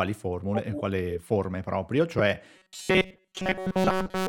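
A speech recording, with two distinct faults. At 2.19 s, right after "e quale forme proprio", there is a brief blip from damaged data in a compressed stream: a run of corrupted bytes makes the decoder misread or reject the affected frame, lose synchronisation and skip forward to the next valid frame header. From 2.56 s to 4.28 s the speech becomes a rigid, metallic buzz at 188 Hz. This robotic sound from repeated short buffers is likely caused by audio arriving too slowly, with the playback filling the gaps by looping the most recent chunk of roughly 5.3 ms. That period sets the fixed 188 Hz pitch. Most of the material in that stretch, around seven tenths, is repeated rather than new, so the speech only loosely tracks its original contour until the end.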